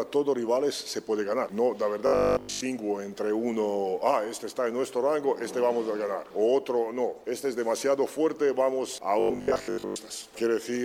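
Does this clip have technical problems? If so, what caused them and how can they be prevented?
Yes. Robotic sound from repeated short buffers occurs from 2.07 to 2.63 s and again from 9.20 to 9.96 s. The audio turns into a rigid 50 Hz buzz, which fits a 20 ms slice being replayed over and over while the real audio is skipped. The first stretch is entirely repeats, the second mostly. This likely comes from audio arriving too slowly for playback. Larger buffers or steadier delivery would prevent it.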